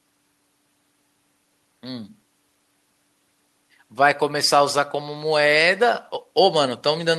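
No technical faults are audible anywhere in this speech recording. At no point does the audio shift in a way that would point to a problem in how it was captured or carried.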